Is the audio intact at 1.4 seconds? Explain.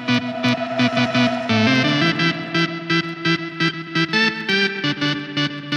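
No. Clock slip clicks run from 0.10 to 5.77 s, about 50 per second. Each single-sample slip likely comes from two unsynchronised clocks differing by roughly a tenth of a percent. The result is a soft rattle, shown as evenly spaced thin vertical lines on a spectrogram and tiny steps in the waveform.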